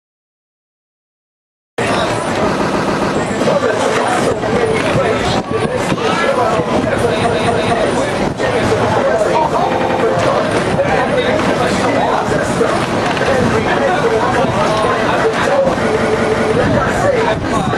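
Because the recording started late, there is a cut-off start: digital silence runs from 0 to 1.78 s, and then the sound begins abruptly, mid-event, with no natural attack or fade-in.

Runs of compressed frames were sent more than once, so the decoder replays the same short block and the sound stutters. At 2.56–3.12 s a 139 ms block plays four extra times. At 7.25–7.71 s a 232 ms block repeats twice. At 9.71–9.99 s a 93 ms block repeats three times. At 15.93–16.49 s a 186 ms block repeats three times. These repeated frames add roughly 0.3 to 0.56 s each.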